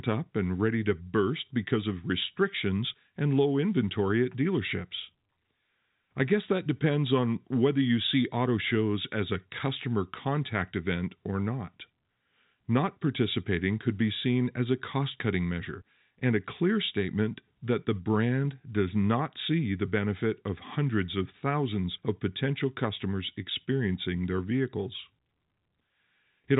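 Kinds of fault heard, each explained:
No technical faults are present; the speech carries the narrow band of telephone-style coding, consistent with G.711 A-law at 64 kbps, so nothing reaches above about 3.8 kHz and only a faint level-following quantisation hiss sits beneath the signal.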